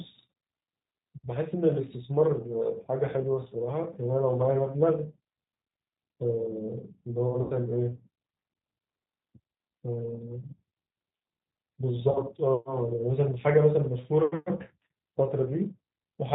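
Throughout the speech, the G.729 codec's signature is plainly audible. The band stops at 4 kHz, so sibilants lose their crispness, and the voice has the slightly rough, synthetic texture of a decoder that rebuilds each 10 ms frame from a vocal tract filter, a pitch predictor and a few pulses. The character fits an 8 kbit/s G.729A link.

From 7.42 to 7.53 s there is VoIP packet loss concealed by the speech codec. About 80 ms of audio is missing, which fits four 20 ms packets. The decoder keeps repeating its last pitch and filter at falling gain, so the speech smears into a buzzy tone or coloured noise that fades. It stays thin briefly after real packets resume, because each frame depends on the previous one. A shorter gap from 12.11 to 12.20 s replaces about 40 ms the same way, giving a briefer concealed stretch and dip.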